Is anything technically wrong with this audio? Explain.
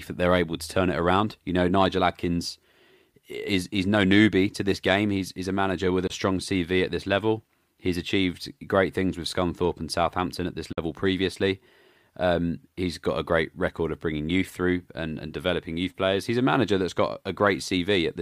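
Yes. The speech cuts to silence twice, at 6.07 to 6.10 s just after "manager with" and at 10.72 to 10.78 s after "at this", then resumes as though it had kept playing. This is a Bluetooth dropout, likely from packets arriving too late at the headphones. The gaps of about 23 and 46 ms fit one and two lost packets.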